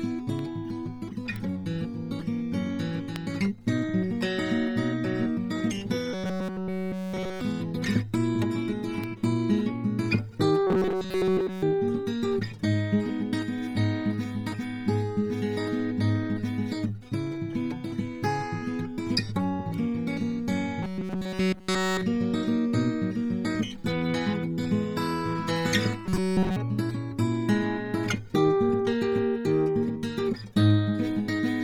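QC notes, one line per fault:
throughout: Bluetooth LC3 compression. The music has a grainy, breathy sheen across the upper range, where detail has been replaced by noise-like filler instead of real harmonics. The damage is heavy, which fits LC3 at around 32 kbps with 10 ms frames, the likely cause. On a spectrogram the upper bands look blotchy and speckled, with texture changing in 10 ms blocks rather than showing clean partials.
0.39, 1.36, 3.16 and 9.04 s: bit error spike. Each is a single sharp tick unrelated to the music. A flipped bit throws one to three samples (three at 0.39 and 3.16 s, one at 1.36 s, two at 9.04 s) off by a power of two before they snap back. On the waveform each appears as a lone needle jutting out of the surrounding signal. On a spectrogram each is a thin vertical line spanning the full frequency range.
6.13–7.41, 10.67–11.63, 20.83–22.03 and 26.06–26.56 s: robotic sound from repeated short buffers. 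In each span the music collapses into a rigid metallic buzz at 188 Hz. Essentially all the audio in these spans is the same short fragment looping. The likely cause is late-arriving audio being covered by repeating the last buffer, about 5.3 ms long, while the real material is skipped. The waveform shows an identical short cycle tiled over and over. The spectrogram shows evenly spaced horizontal harmonics at multiples of 188 Hz.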